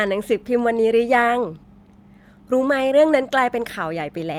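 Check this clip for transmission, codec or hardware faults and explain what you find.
No transmission, codec or hardware faults are audible in this speech clip.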